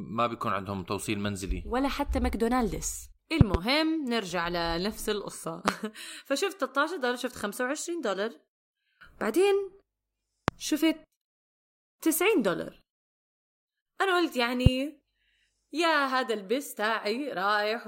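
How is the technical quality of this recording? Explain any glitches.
Loud pops at 3.41–3.57 s (a double pop), 5.68–5.71 s, 10.48–10.51 s and 14.66–14.69 s, far louder than the speech. A voltage pulse, likely from a plug, switch or static discharge, is added to the signal and heard as a sharp thump while the speech continues underneath.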